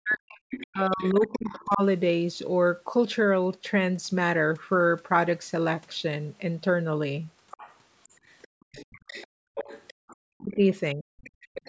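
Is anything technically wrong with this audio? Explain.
Yes. The speech is hurt by echo cancellation working through double talk, and the call microphone processing is working normally. Its band stops at 8 kHz.

From 0.0 to 1.83 s, and again from 10.41 to 11.05 s, the speech dips and breaks up. This is speech suppressed in double talk. The first dip is deep, roughly 40 dB, and the second is about 25 dB. It is likely the canceller turning down both voices at once.

A second voice leaks through from 0.5 to 1.75 s, from 7.51 to 10.55 s, and from 11.22 s to the end. It sits roughly 20 dB below the speech, and nearer 15 dB at the end. This is likely the other side's voice leaking through from the loudspeaker.

The room sound drops out at 8.48 to 8.72 s, 9.27 to 10.08 s, and 11.33 to 11.41 s. Each drop is about 34 to 40 dB deep. This is background gated by the echo canceller, which clamps the microphone while the loudspeaker plays.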